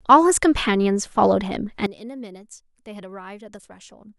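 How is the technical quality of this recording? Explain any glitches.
The recording has one clear fault. From 1.86 s to the end, the speech drops by about 19 dB and turns faint. The likely cause is one channel inverted: when the stereo pair is summed to mono, the centred voice cancels, leaving only a faint residue. A plain gain drop would keep the tone; this leaves only the mismatch between the channels.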